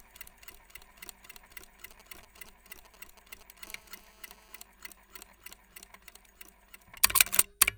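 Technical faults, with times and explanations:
1.91–3.66 s, GSM signalling bursts: a galloping dit-dit-dit of short buzzes sits roughly 20 dB below the sound. A nearby 2G phone is exchanging brief groups of radio bursts with the network, and the audio circuit rectifies them into audible pulses repeating at about 217 Hz. Unlike the steady buzz that follows, this comes in separate clusters with gaps between them, the pattern a phone makes while signalling rather than carrying a call.
3.67–4.63 s, GSM phone buzz: the clusters give way to a continuous, hard, raspy buzz at 217 Hz, full of harmonics and about 25 dB below the sound. It bears no relation to what the audio is doing. The phone has moved into a call and now transmits its bursts 217 times a second without a break, so the rectified interference becomes an unbroken tone rather than the earlier stuttering groups.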